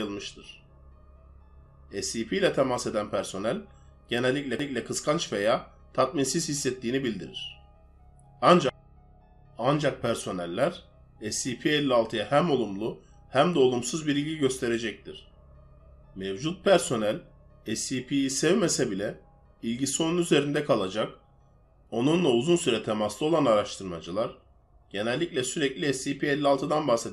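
The signal shows no technical faults at any point in the recording.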